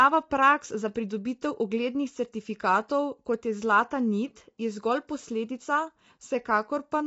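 From start to finish the voice sounds rough and grainy, with a hiss-like fill between the harmonics, and nothing comes through above about 7.7 kHz, so the top end feels dull and a bit artificial. That's likely low-delay AAC compression, the AAC-ELD kind used on video calls. Its short frames can't pin down pitch harmonics well, and the damage here is plainly audible, which fits a bitrate around 24 kbps.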